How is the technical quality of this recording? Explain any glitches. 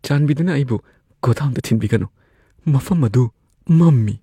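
No technical faults can be heard anywhere in the recording, and the signal holds steady throughout.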